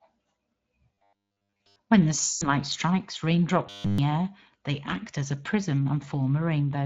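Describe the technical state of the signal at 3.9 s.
At 3.9 s the audio sits inside a stretch of robotic sound from repeated short buffers, running from 3.67 to 3.98 s. The signal there is a rigid, metallic buzz at 100 Hz that only loosely tracks the underlying speech, with essentially the whole span affected. The likely cause is new audio arriving too late, so the playback side keeps re-sending its last fragment. A 100 Hz pitch matches a 10 ms chunk looping back to back while the real audio between is dropped.

Beneath this, Speex codec damage is plainly audible at this moment as it is throughout. The CELP coder rebuilds the voice from a predicted excitation and a spectral envelope, and at the setting heard here, which points to a mid-range bitrate of around 20 kbps, that excitation is too coarse. The speech comes out hoarse and grainy, and any content above 8 kHz is only a shaped noise fill, not real detail.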